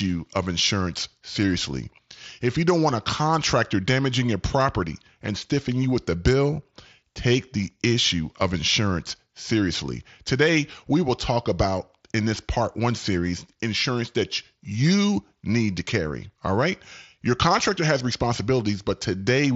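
No technical faults occur at any point in this speech clip, which comes through a wideband Bluetooth headset link.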